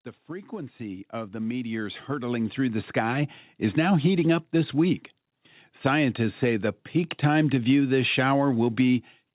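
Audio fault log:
0.27 to 3.88 s, automatic gain rising: The level climbs steadily for over three seconds. The speech and the background noise swell together, by about 15 dB in all. The gain control judged the input too quiet and turned itself up gradually, so the rise is a slow ramp rather than a jump. It settles just before "heating up this week". The narrow band throughout, with nothing above 4 kHz, belongs to the telephone-grade call path.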